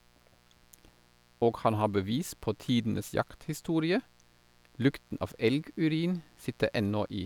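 A steady, raspy buzz sits under the speech from start to finish, low in level but edgy rather than a smooth hum. This is mains buzz locked to a 60 Hz supply: something like a dimmer, a rectifier or a missing shield has let sharp switching spikes into the audio path twice per mains cycle. Because those spikes are so abrupt, their harmonics climb well into the kilohertz range, which gives the buzz its rasp.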